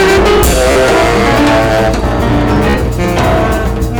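Hard clipping runs through the whole clip. The signal is driven about 18 dB past what the stage can pass. Nearly a third of the samples hit the limit and are cut flat. The flat tops add high harmonics, so every loud moment has a harsh fuzz.

At 0.71 s a Bluetooth stutter appears, lasting until 0.76 s. About 43.5 ms of audio went missing, which fits three lost packets. The receiver replayed its last short slice meanwhile, giving a brief machine-gun buzz. The sound then jumps ahead. The same stutter returns from 2.70 s to 2.75 s, again with about 43.5 ms lost.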